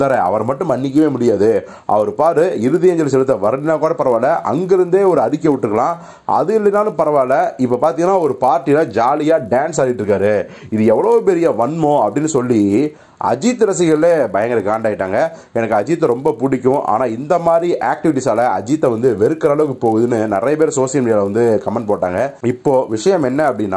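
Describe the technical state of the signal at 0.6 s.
At 0.6 s, as throughout, a resampler restarted on every block leaves edge errors every 20 ms, a 50 Hz buzz that fits a 48 kHz to 24 kHz conversion, and that, unlike mains hum, vanishes in silence.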